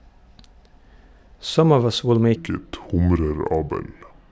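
From 2.36 s, just after "us will", to the end, the speech turns slow and low: a wrong sample rate. Speed drops to about 0.73 and pitch falls about 5.5 semitones together, fitting 22 kHz audio played at 16 kHz. A pitch shift or time-stretch would change only one.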